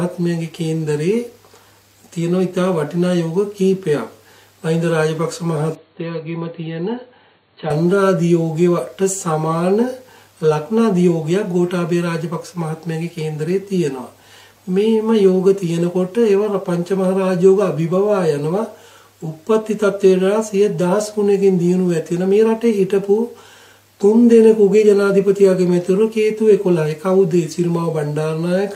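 From 5.75 to 7.70 s the input likely switched to a poorer device, whose narrower band passes nothing above 4.4 kHz. With no gap at the change, the sound turns dull and boxy, drops a few decibels in level and gains a faint new background hiss.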